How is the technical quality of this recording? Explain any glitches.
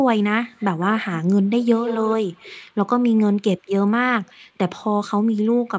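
The speech carries a bit of echo leak in three spots: 0.56 to 0.82 s faintly, 1.49 to 2.62 s quite audibly, and 4.26 to 4.33 s barely. It's a ghost copy trailing about 155 ms behind, most likely from a far-end speakerphone whose echo canceller let some pickup through. The top end stops around 8 kHz, which is normal for call processing.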